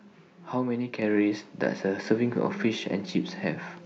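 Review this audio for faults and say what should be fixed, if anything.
At 1.02 s speech and background jump together by about 4 dB, a microphone volume step-up from the call software raising the device's input gain. Prevent it by turning off automatic microphone level adjustment and setting the input gain correctly before the call starts.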